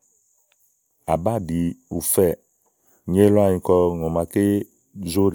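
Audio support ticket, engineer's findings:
Engineer's findings: no audio fault found in the speech clip attached to this support ticket.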